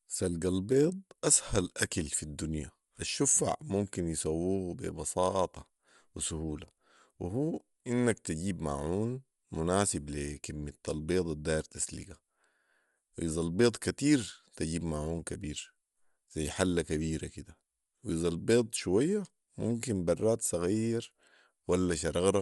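From start to finish the speech carries a breathy, grainy edge, likely from Bluetooth LC3 compression. A transform codec working in 10 ms frames at this rate discards upper-spectrum detail and patches gaps with synthetic noise. Nothing reaches above about 11.5 kHz, which points to a 24 kHz sample rate. A spectrogram shows a hard ceiling there, with speckled, frame-blocky noise beneath it in place of clean harmonic structure.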